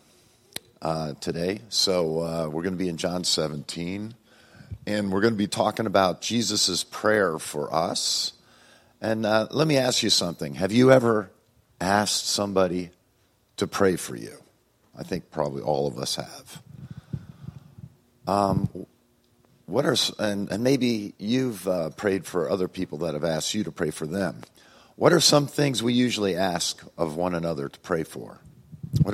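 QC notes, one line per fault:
3.26–5.48 s, 15.36–15.96 s, 20.60–21.78 s: drift correction step. The first two play about 5.9% slow, pitched about a semitone low. The third runs 5.9% fast, a semitone high. A clock-matching resampler likely jumped its rate to rebalance its buffer.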